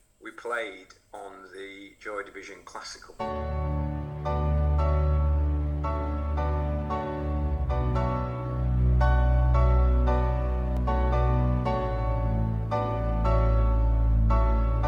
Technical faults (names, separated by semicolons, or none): repeated buffer